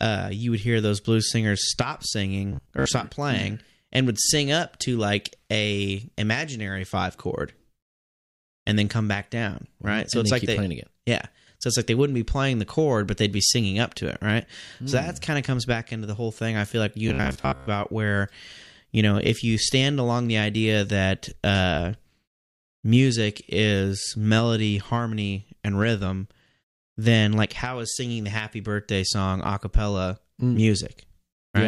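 From 2.53 to 2.87 s, after "those blues singers stop", and from 17.08 to 17.70 s, after "I feel like you", the speech turns into robotic sound from repeated short buffers: a rigid 66.7 Hz metallic buzz, likely from a 15 ms buffer being looped. About half the audio is lost in the first event and most of it in the second.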